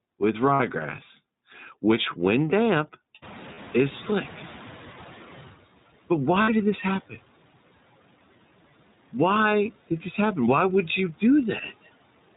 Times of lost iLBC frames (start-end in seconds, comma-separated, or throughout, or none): 0.54-0.60, 3.54-3.59, 6.42-6.50